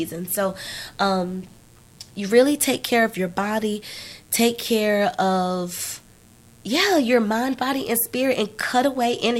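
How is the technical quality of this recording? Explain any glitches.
The recording carries a single fault that runs through the whole speech clip. Mains buzz, present from start to finish: a sharp, spiky interference on a 60 Hz supply, of the kind a dimmer or rectifier produces, is coupling into the signal path, perhaps through a poorly shielded cable, with two switching pulses in every mains cycle. Those narrow pulses build a dense ladder of 60 Hz harmonics extending into the kilohertz range, heard as a constant raspy buzz sitting roughly 35 dB under the speech.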